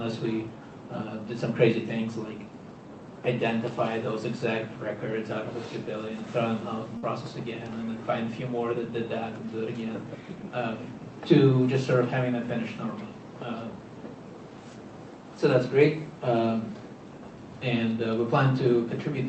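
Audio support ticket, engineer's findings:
Burst of packet loss, 6.97 to 7.04 s. Last sound held and faded for about 51 ms, then audio resumes roughly 60 ms further on. Jitter buffer concealment over lost packets. Call codec path, top end cut near 8 kHz, consistent with Opus.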